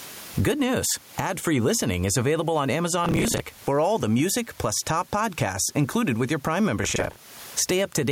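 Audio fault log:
Throughout, gain pumping: the gain swings by around 20 dB, so loud and soft passages are pressed toward one level, with the room noise sitting about 36 dB below the speech. The likely cause is microphone gain set far too high, with a fast limiter or compressor clamping down on each peak and releasing in the gaps.
3.05–3.4 s and 6.84–7.16 s, processor overload crackle: the first burst falls between "listening is available on" and "for all the music", the second near the end. Each is a gritty tearing laid over the speech, built from short fragments of earlier audio replayed with hard edges. This points to the processor repeatedly missing its deadline on buffers of roughly 10 ms, somewhere around fifteen to twenty in a row, then recovering once the load eased.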